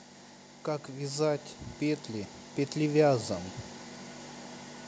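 From 0.86 s to 3.32 s the level climbs steadily by about 7 dB, a case of automatic gain rising: the gain control judged the input too quiet and kept turning it up over nearly two and a half seconds. The voice and the background noise swell together, so the room seems to creep closer. On a waveform the envelope widens in a smooth ramp; on a spectrogram every band, including the noise floor between syllables, brightens evenly across that span.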